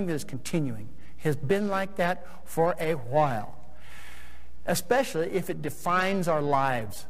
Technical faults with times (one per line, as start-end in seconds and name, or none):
0.00-7.09 periodic clock jitter